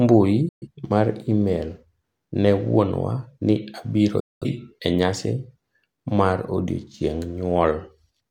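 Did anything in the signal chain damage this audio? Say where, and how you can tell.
Yes. A digital broadcast dropout silences the speech twice, from 0.49 to 0.68 s and from 4.20 to 4.47 s. Both times the sound fades out within about 3 ms and stays muted. The receiver lost the signal or rejected corrupted frames and muted until valid frames returned. The missing stretches, about 128 ms and 213 ms, fit roughly three and five lost frames, and whatever was transmitted during those gaps is gone for good.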